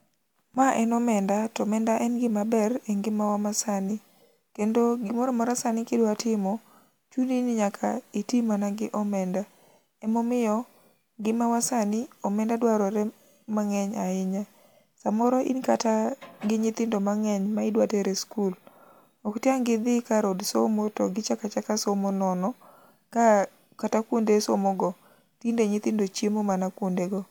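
No technical faults are audible.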